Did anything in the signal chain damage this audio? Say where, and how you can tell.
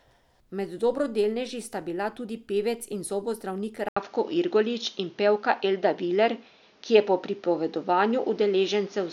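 Yes. After "tudi pevec in zobozdravnik", at 3.89 s, an 80 ms gap appears. The speech returns duller, shifted roughly 5 dB in level, over a new noise floor about 35 dB down. The spectrogram shows nothing above 6.8 kHz from there onward. This likely means the input switched to a poorer device at the driver stage.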